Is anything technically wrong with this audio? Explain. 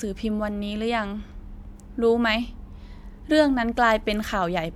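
No, nothing in this speech recording stood out as a technical problem on listening.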